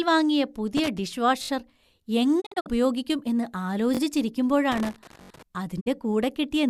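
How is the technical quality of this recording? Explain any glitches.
The speech recording has three kinds of glitches: connector crackle, stuttering repeats and brief dropouts.

Loose connector crackle, 0.77–0.98 s and 4.72–5.43 s: a worn contact kept making and breaking, chopping the signal into irregular bursts of scratchy crackle.

Repeated buffer, 1.43–1.49 s (three extra plays), 5.23–5.29 s (three extra plays) and 3.95–3.99 s just after "ഉപയോഗിക്കും എന്ന്" (two extra plays): fresh audio arrived late, so the device replayed its last 21 ms chunk, which fits a 1024-sample buffer. Each repeat produces a quick stutter with hard joins.

Digital broadcast dropout, 2.40–2.68 s, just before "ഉപയോഗിക്കും എന്ന്", and 5.79–5.88 s: the receiver lost good frames and muted with about 20 ms fades. The first dropout leaves scattered holes totalling 144 ms over 240 ms, the longest 48 ms. The second loses 48 ms.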